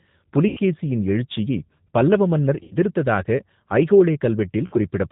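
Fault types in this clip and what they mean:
G.729 codec: The speech sounds plainly rough and slightly synthetic throughout, with nothing above 4 kHz. This comes from an 8 kbit/s codec that rebuilds each 10 ms frame from a vocal tract filter, a pitch predictor and a handful of pulses.
VoIP packet loss concealed by the speech codec: The speech is stretched into a buzzy tone or coloured noise that fades at 0.48–0.60 s before "எழுச்சியைப் பல்லவ மன்னர்", at 2.63–2.77 s after it, and at 4.67–4.77 s. The decoder extrapolated its last pitch and filter over roughly 90, 90 and 60 ms of lost packets.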